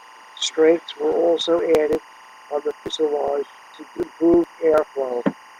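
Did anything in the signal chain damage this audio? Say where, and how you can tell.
Yes. Timecode bleed in the analogue wiring: linear timecode from a neighbouring track or cable has coupled into the audio path. The code's square wave flips between tones around 1 kHz and 2 kHz, and it runs at 23.976 frames per second, so it sits under the speech for the whole clip as a steady, chirping warble, roughly 25 dB below the wanted signal.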